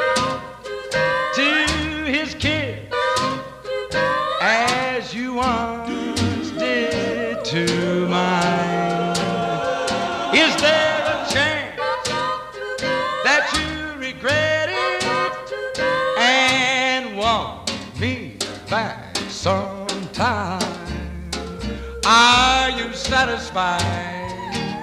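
A drift correction step likely jumped the playback rate by 5.3% from 20.18 to 20.68 s, so sound runs fast and sharp by 90 cents, then snaps back.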